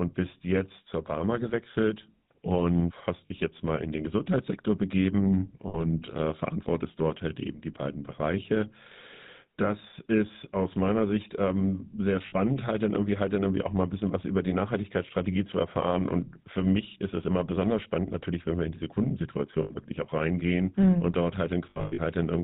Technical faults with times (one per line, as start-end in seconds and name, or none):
0.00-22.43 GSM full-rate codec
3.26-3.31 lost GSM frames
5.68-5.83 lost GSM frames
12.26-12.34 lost GSM frames
19.62-19.72 lost GSM frames
21.70-22.00 lost GSM frames